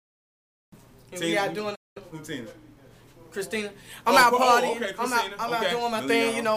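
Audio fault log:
1.75–1.97 s, playback stall: the sound cuts out in mid-flow and the output sits in dead silence for about 200 ms before carrying on again. It's a hole in the sound, just nothing coming out for a moment. That points to the player likely running dry of buffered data or having its audio thread held up, so there was simply nothing to send to the output until it caught up.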